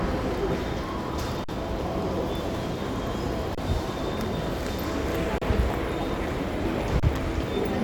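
At 1.44 s the sound freezes for about 46 ms in an underrun with held sample. The output buffer ran dry, so the converter held its last value and the waveform sat flat at that level. The length fits a 2048-sample buffer. The same stall recurs at 3.55 s (28 ms), 5.38 s (33 ms) and 7.00 s (30 ms). Each time playback resumes where it stopped with essentially nothing lost, so each restart gives only a soft click.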